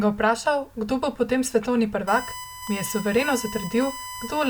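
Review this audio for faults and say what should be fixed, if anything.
USB whine begins at 2.07 s, right after "kdo bo potem svetovni", and runs to the end of the clip. It is a steady 1 kHz tone, sitting roughly ten decibels below the speech. It comes from the USB bus drawing current in 1 ms frames, which leaks into the audio through shared power or ground. Mains hum sits at 50 or 60 Hz and its harmonics, but this pitch locks to exactly 1 kHz. To prevent it, power the interface separately or use a USB isolator, and keep the audio ground away from the computer's supply.

Overlap between stream segments shows up at 2.67 s as a tiny skip. Where two segments' time stamps overlap, the player trims the overlap even though that audio wasn't really duplicated, so a few milliseconds of speech disappear and the waveform jumps. A dropout leaves a gap or silence, but here nothing goes quiet; the sound just lurches forward. 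The segments are about 6 s long. To prevent it, write segment time stamps so that each segment starts exactly where the previous one ends.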